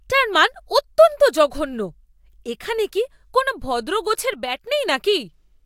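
One stereo channel likely dropped out from 4.33 to 4.67 s in this speech clip, so after mono summing the speech abruptly falls about 6 dB, then recovers.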